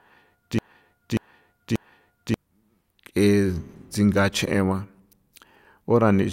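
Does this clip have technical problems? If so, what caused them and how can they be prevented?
Yes. A broken-record loop is already under way at 0.0 s and runs to 2.34 s: a 0.59 s speech fragment repeats exactly three times. The likely cause is a stalled player or stream resending its last buffer, so the original audio there is lost. Stall detection that outputs silence instead of replaying stale buffers prevents it.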